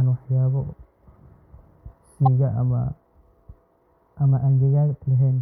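At 2.24 to 2.27 s a corrupt frame was decoded: bit errors in the compressed stream went uncorrected, so the decoder used wrong gains and codes, which fits a couple of damaged frames. Misplaced energy cuts into the speech as a brief, loud chirp-like burst peaking around -10 dBFS.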